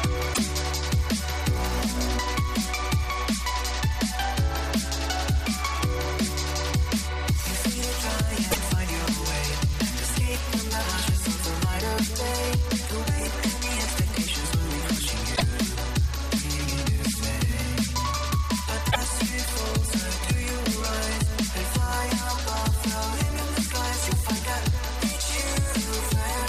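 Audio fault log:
0.30–0.38 s, 8.48–8.57 s, 15.32–15.42 s, 18.88–18.96 s: damaged data in a compressed stream. Corrupted frames make the decoder lose sync and hunt for the next header, giving brief disruptions. Each shows as a roughly 0.1 s smeared vertical burst or abrupt waveform discontinuity.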